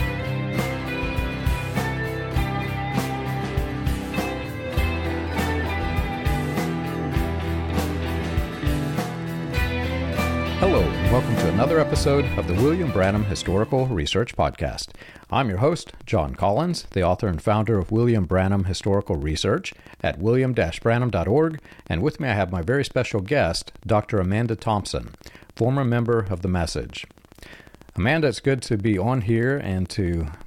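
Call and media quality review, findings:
Train of clicks from 7.69 s to 30.42 s, running to the end. Regular ticking at 14.3 clicks per second. Around 300 clicks in total. Each click peaks at roughly the level of the programme sound. Clicks are audible over the sound and through pauses. Uniform click shape points to a single repeating source. Likely cause is electrical interference from nearby equipment or a faulty connection or power supply injecting pulses at a fixed interval.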